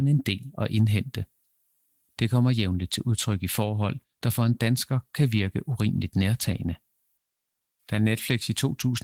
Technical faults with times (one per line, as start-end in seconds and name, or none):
none